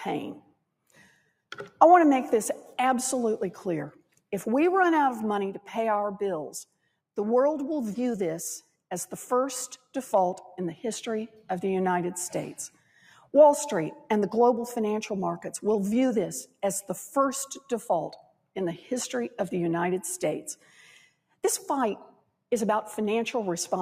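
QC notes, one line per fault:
throughout: noise suppressor applied to music or sounds. A speech-tuned suppressor stays active, treating steady tones, ambience and tails as noise, so level swings by around 5 dB and the sound pumps or thins.
0.41-1.30 s, 3.92-4.23 s, 12.69-13.33 s, 16.46-16.63 s, 18.16-18.56 s, 20.55-21.39 s, 22.10-22.43 s: sound cut by the noise suppressor. The suppressor mistakes these passages for noise and pulls them down by about 14 to 19 dB. Sustained or decaying parts sink or end early while onsets pass.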